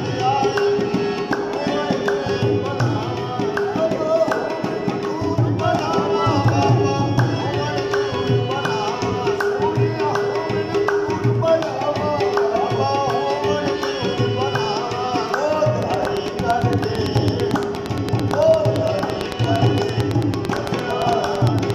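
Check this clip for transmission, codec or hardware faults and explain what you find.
One hardware-type fault is present: a train of clicks from 15.83 s to 21.71 s, running to the end of the audio. Around fifty near-identical pulses arrive at a steady 8.85 per second, so something is repeatedly injecting a brief spike into the signal path, likely electrical interference from nearby equipment or a faulty connection or power supply. The result is a regular ticking laid over the sound and continuing through the gaps, with peaks about 15 dB above the programme level.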